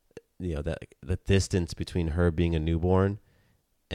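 Nothing stood out on listening to this short speech recording.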